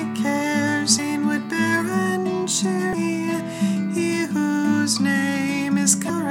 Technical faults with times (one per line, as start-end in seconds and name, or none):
0.98 damaged data in a compressed stream
2.93 damaged data in a compressed stream
6.09 damaged data in a compressed stream